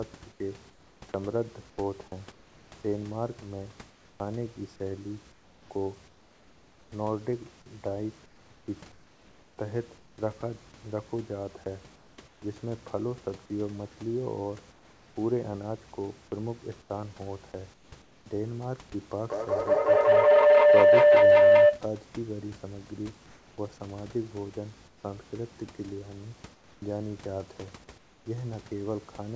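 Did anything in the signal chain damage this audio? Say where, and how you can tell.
Yes. At 0.32–6.92, 8.26–10.18, 11.96–12.42, 14.72–15.16, 16.82–18.26, 23.26–25.04 and 26.54–28.26 s, the room background turns into flat, featureless hiss (about 4 dB quieter at 14.72 s). That is likely comfort noise in place of the background, from call processing's discontinuous transmission.

From 19.25 to 21.91 s, a feedback howl builds to about 14 dB above the speech near 500 Hz, pulsing roughly every 200 ms. Two devices on the call formed an acoustic loop with gain above unity.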